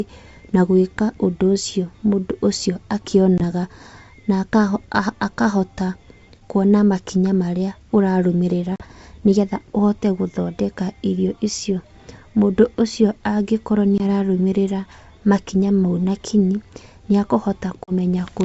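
Packet loss on the ADPCM call punches sharp-edged silent gaps at 3.38 s, 8.76–8.84 s, 13.98–14.01 s and 17.84–17.92 s (20–40 ms). The waveform drops abruptly to flat, and the spectrogram shows full-height blank columns. After each gap the speech returns slightly distorted as the mismatched decoder predictor resettles.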